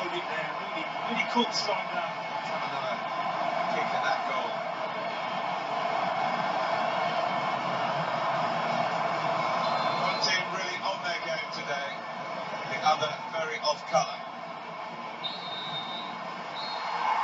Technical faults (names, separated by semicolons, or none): none